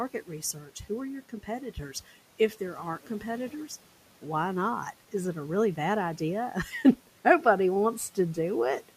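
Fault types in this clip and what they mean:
Speech cut by the noise suppressor: at 3.03–3.23 s the suppressor treated quiet speech as noise and turned it down by about 10 dB for roughly a tenth of a second, so it sounds swallowed; the waveform envelope dips, and spectrogram energy briefly fades.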